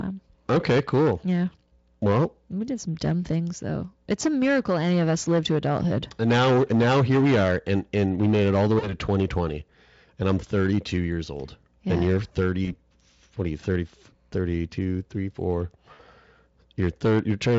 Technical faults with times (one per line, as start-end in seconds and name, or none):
0.00-17.59 hard clipping
8.79-8.94 VoIP packet loss concealed by the speech codec
12.65-12.75 VoIP packet loss concealed by the speech codec
15.93-16.00 VoIP packet loss concealed by the speech codec